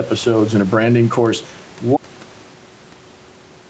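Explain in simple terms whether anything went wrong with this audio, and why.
Two things went wrong. The first is gain pumping, which runs through the whole recording. The microphone level was most likely set too high, so an automatic level control kept pulling the volume down whenever the speech got loud and letting it rise again in the pauses. Loud and quiet moments sound squeezed closer together.

The second is an audio dropout to silence starting at 1.97 seconds and lasting to the very end. The sound input was probably lost, through something like a disconnected device, a broken link or an accidental mute, while the recording carried on writing nothing. The speech stops abruptly mid-flow, and after that there is total silence, without even the background room sound, so whatever came next is missing.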